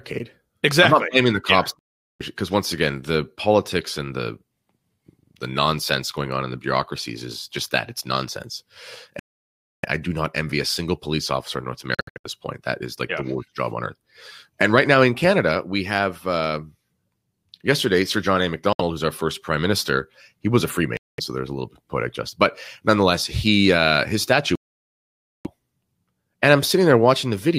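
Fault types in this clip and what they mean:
Bluetooth dropout: six abrupt silences of 64 ms to 0.9 s, likely late wireless packets being dropped; speech resumes further on, as though it had kept playing.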